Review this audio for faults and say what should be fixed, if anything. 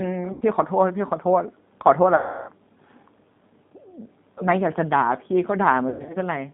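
The speech carries G.729 codec damage throughout. Only about 150 Hz to 3.7 kHz survives, and the sound is rough and slightly synthetic because each 10 ms frame is rebuilt from a vocal tract filter, a pitch predictor and a few pulses, which fits an 8 kbit/s G.729A link. Preventing it means using a wideband codec such as G.722 or Opus at a higher bitrate.

VoIP packet loss concealed by the speech codec occurs at 0.33–0.45 s (80 ms missing), 2.16–2.51 s (320 ms missing) and 5.90–6.17 s (180 ms scattered over 240 ms, longest gap 100 ms). In each, the decoder stretches the last pitch and filter into a fading buzzy tone or coloured noise, and the sound stays weak for a while after the gap. Preventing it means cutting network loss with QoS prioritisation or adding forward error correction and a suitably sized jitter buffer.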